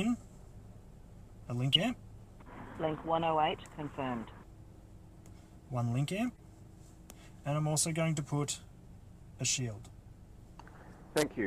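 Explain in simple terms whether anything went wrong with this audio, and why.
Two short glitches come from a corrupt frame decoded. At 1.73 to 1.82 s there is a loud burst, and at 6.35 to 6.43 s a much fainter blip. In both spots, a compressed chunk of audio had some of its bits scrambled, but the decoder played it anyway. It misread the damaged data and put sound at the wrong pitches for a few frames, about 80 to 90 ms each time, producing a brief chirp or squeak.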